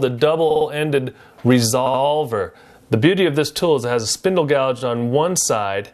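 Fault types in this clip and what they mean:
Repeated frames: the decoder plays a stretch of compressed audio again, heard as stutters at 0.50–0.66 s (52 ms played four times), 1.86–2.01 s (78 ms played three times) and 4.78–4.81 s (26 ms played twice). This fits 26 ms frames and adds 0.34 s.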